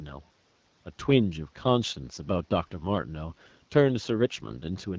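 AMR bit errors from 3.30 to 3.54 s corrupt a few percent of weakly protected bits, so the speech holds its pitch but turns hoarse and gargly.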